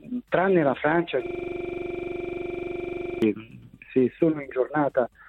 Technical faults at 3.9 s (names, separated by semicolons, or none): none